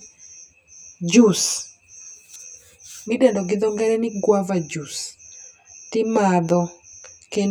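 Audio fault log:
throughout, channel delay (comb filtering): the speech sounds hollow and phasey, as if heard down a tube, with a character that never changes across the clip. One channel trails the other by roughly 10 ms, and when the two are summed to mono, the content they share cancels at evenly spaced frequencies. This carves a series of fixed notches into the spectrum, the first of them low, somewhere around 40 Hz.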